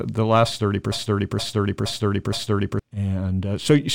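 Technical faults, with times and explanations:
0.92–2.79 s, broken-record loop: the playback or stream path likely stalled and kept resending the last fragment it still held, so just after "last thirty" the same 0.47 s piece of speech plays four times in a row, each copy identical and butted against the next. Because the chain was stuck replaying old data rather than advancing, the speech that belonged in those nearly two seconds never arrives and is lost.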